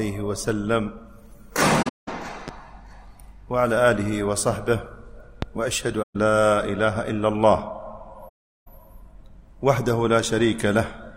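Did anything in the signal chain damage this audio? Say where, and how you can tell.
Yes. Soft-edged holes at 1.82–2.08 s, 6.02–6.16 s and 8.28–8.68 s fade out and back in, losing about 235 ms, 128 ms and 384 ms. This is AAC frame loss with muting at the codec: the decoder zeroed missing frames, and overlapping windows smoothed the edges.

Two loud pops, a single sharp thump each, sit on top of the continuing sound at 2.48–2.51 s, peaking about 10 dB above it, and 5.42–5.45 s, about 15 dB above. The likely cause is an electrical step in the analogue wiring, such as a switch, plug or static discharge.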